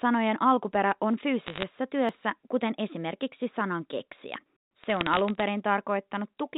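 Bit errors on a digital phone line strike first, from 1.46 to 1.63 s, just after "alkuperä on": flipped bits in the 64 kbit/s G.711 stream, at a rate somewhat under one percent, corrupt single samples, and hits on sign or high-order bits turn into sharp ticks. The burst sounds like brittle crackle laid over the speech, which itself stays intact within the telephone band below 4 kHz. The same fault returns from 4.84 to 5.43 s at a lower error rate, so the crackle there is sparser but spread across a longer stretch.

A dropped buffer (overrun) sits at 2.09 s, just before "kuten esimerkiksi sanan keksiä". The likely cause is that the capture software failed to read its samples before the hardware overwrote them, so roughly 20 ms of audio vanished and the two edges were spliced together. Nothing goes silent: the sound simply skips ahead. A second, longer overrun at 4.46 s, right after "kuten esimerkiksi sanan keksiä", loses about 40 ms, giving a longer jump ahead.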